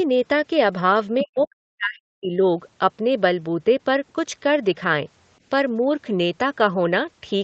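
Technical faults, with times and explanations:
1.19–1.25 s and 1.43–1.47 s, other side's voice leaking through: two brief scraps of a second voice sit under the main talker. The first is fairly strong, around 10 dB below the speech, and the second is much fainter, around 30 dB down. These are likely loudspeaker playback of the far end reaching the microphone and not fully cancelled. At 60 ms and 40 ms they are too short to form anything continuous, so they come through as chopped fragments.
1.22–2.39 s, speech suppressed in double talk: the main voice dips, with the deepest dips reaching roughly 40 dB down and about a second affected in all. This overlaps the first leak, so both sides were likely active at once. The echo canceller could not tell the near talker from the echo and attenuated everything.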